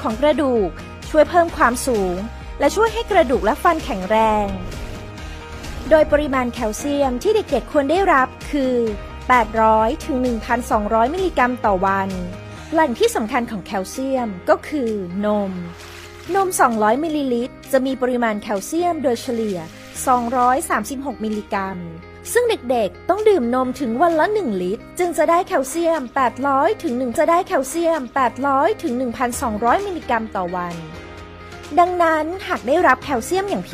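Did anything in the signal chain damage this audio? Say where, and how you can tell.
Yes. At the streaming and playback stage, the player queued one stream segment twice. From 27.15 s to 29.14 s, roughly 2.0 s of the programme plays a second time. A small blip at the jump back marks the seam. This is a stream segment repeated.

Near the end, from 32.89 s to 32.92 s, hard clipping occurs. A level about 2 dB too hot for a converter or sample-format stage flattened the peaks. That brief overload adds high harmonics and is heard as a short crackle on the loudest moment.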